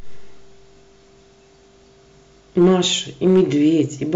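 A stage is overdriven by about 3 dB at 2.58–2.75 s and 3.27–3.41 s, and about 4 dB at 4.15 s. Hard clipping flattens those speech peaks into brief crackle.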